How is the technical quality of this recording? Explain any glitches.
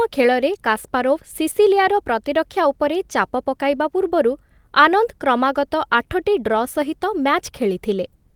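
Nothing in this recording stood out as a technical problem on listening, and there are no glitches to explain.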